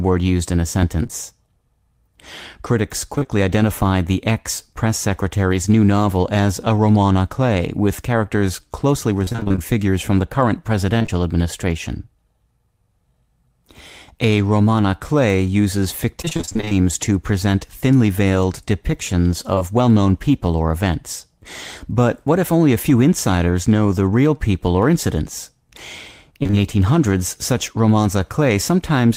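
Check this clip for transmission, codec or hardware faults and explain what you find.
Packet-loss faults are present, of two kinds, both from audio arriving too late and being patched by the decoder.

Short concealed packet loss occurs at 1.03–1.11 s and 19.55–19.63 s. Each time, about 40 ms went missing and was filled by extending the preceding sound, which produces a brief smear or wobble. On a spectrogram, harmonics run flat and blurred. On the waveform, a short, too-regular stretch appears.

Repeated packet loss (robotic sound) occurs at 3.15–3.27 s, 9.25–11.1 s, 16.22–16.73 s and 26.43–26.55 s. Gaps of up to about 27 ms recur and are concealed one after another, giving choppy speech with pieces missing. The spectrogram shows striped, smeared patches, and the waveform shows repeating segments.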